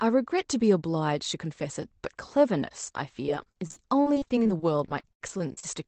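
From 2.97 to 5.64 s, repeated packet loss (robotic sound) makes the speech choppy. Gaps up to 76 ms are bridged with repeated, smeared frames that stop at the call path's 8 kHz ceiling on the spectrogram.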